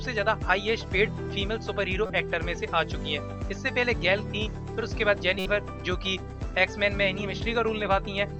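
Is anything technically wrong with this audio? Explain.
Yes. Two corrupt-frame events were decoded, at 2.06–2.10 s and 5.39–5.46 s, each spanning a few codec frames. Flipped bits misread the gains and codes, pushing energy into wrong frequencies. Each event is a short glitch, peaking around -20 and -15 dBFS.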